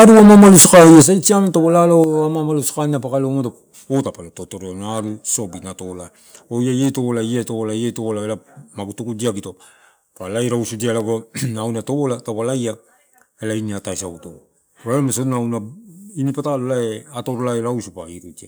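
Microphone overload runs from 0.0 to 1.02 s, just before "sai siam": the speech is driven about 12 dB past full scale, most likely from excessive input gain, flattening a large share of peaks into harsh crackle. Microphone volume stepped down at 1.02 s and again at 2.04 s, likely from the call software reducing input gain after clipping, dropping speech and background abruptly by about 10 dB, then about 6 dB.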